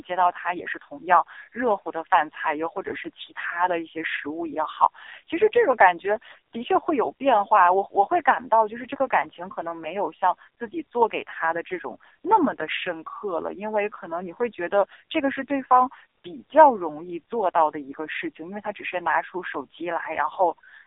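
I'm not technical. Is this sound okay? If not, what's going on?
No. For the whole 21 seconds, the speech has passed through an AMR narrowband mobile codec, the low-quality compression used for 2G and 3G phone calls. It was squeezed into one of its lowest quality settings, rebuilding the voice from a rough model rather than keeping the real sound. Nothing below about 300 Hz or above 3.7 kHz survives, so the voice sounds thin and muffled, like an old phone call, with a buzzy, robotic, artificial edge throughout.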